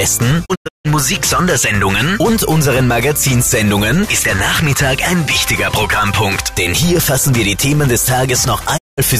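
A digital broadcast dropout hits twice as the receiver loses frames and mutes with quick 20 ms fades. From 0.44 to 0.87 s about 288 ms of audio vanishes in several holes, the longest 160 ms. At 8.76 to 9.00 s a single 192 ms gap follows.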